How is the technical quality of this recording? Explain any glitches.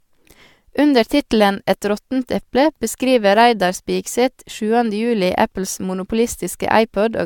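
The quality is compromised by generation loss that runs through the whole recording. The likely cause is the speech having been decoded and re-encoded with an AAC-type lossy codec about three times, at a rate that fits 96 kbit/s. Each pass requantises on a shifted frame grid, so noise and spectral gaps accumulate. Nothing remains above 17 kHz, and the speech sounds swirly, smeared and hollow, with consonant attacks blurred.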